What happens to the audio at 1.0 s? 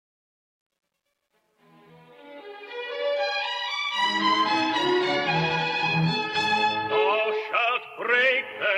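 Truncation distortion on the fade-in, 0 to 3.33 s, worst before 2.17 s: quiet levels step into gritty distortion, fitting an undithered 11-bit stage, unlike steady hiss.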